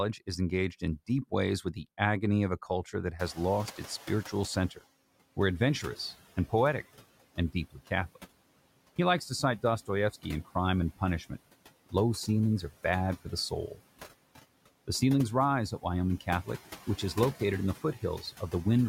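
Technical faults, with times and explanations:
Throughout: noise suppressor artifacts. The suppressor estimates the steady background noise and pulls down each frequency band it judges to be noise, recalculating frame by frame, here by about 16 dB. Because the gain changes with each frame, the background dips in the gaps between words and swells back beneath them.
3.19–4.81 s: noise suppressor catching up. The room noise jumps by about 24 dB around 3 s, settling about 19 dB below the speech. The suppressor's noise estimate is still tuned to the quieter level, so it treats much of the new noise as signal and cuts it by only about 11 dB at first. Over about 1.6 s the estimate catches up, and the noise sinks as the full reduction returns.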